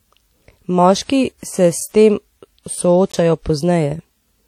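WMA compression runs through the whole clip. The speech has a ringing, washy quality, with a hiss that swells and fades along with the voice. This is likely a transform codec working with long blocks, so its quantisation noise smears across tens of milliseconds around each sound, while quieter spectral detail is discarded outright. The damage is plainly audible, which fits a low bitrate of around 48 kbps on an early WMA encoder.

A block of digital silence occurs at 1.81 s, and another at 3.12 s. At each point a run of samples was replaced by zeros, most plausibly because the output buffer was not filled in time. The audio drops straight to nothing and returns with no fade. The first gap lasts about 4.6 ms and is heard as a tick. The second lasts about 17 ms and sounds more like a brief hole.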